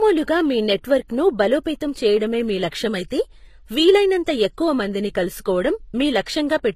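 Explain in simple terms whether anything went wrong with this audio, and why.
Yes, the speech sounds like it has likely been through transcoding between lossy codecs, squeezed twice. From start to finish there's a mix of different compression artefacts heard together and a dull top end with nothing above about 14.9 kHz, which fits an AAC-type encode later re-saved as MP3.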